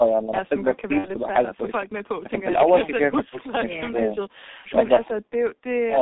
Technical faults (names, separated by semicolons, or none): G.723.1 codec; VoIP packet loss concealed by the speech codec